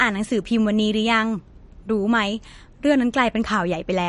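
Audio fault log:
Throughout, MP3 compression: treble stops near 10.6 kHz and speech sounds watery and swirly, likely from a low bitrate near 40 kbps starving weak frequency lines.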